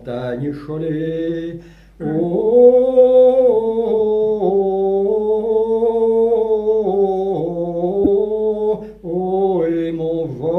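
Two bursts of corrupt frames decoded in the audio, a short one at 0.48 s and a longer, much louder one from 8.03 to 8.08 s. Damaged bits got decoded anyway, so energy lands at wrong frequencies, giving a chirp, squeak, blip or noise burst.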